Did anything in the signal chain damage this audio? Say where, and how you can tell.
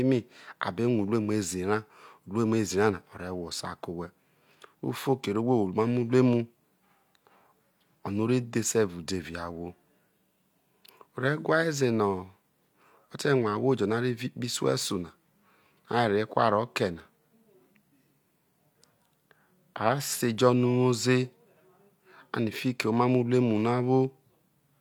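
No, nothing in the signal chain damaged this recording. Listening through the speech, no stage of the chain leaves a mark on the sound.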